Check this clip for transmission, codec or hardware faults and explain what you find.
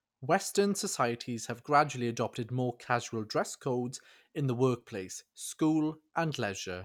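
No transmission, codec or hardware fault is audible in this speech recording.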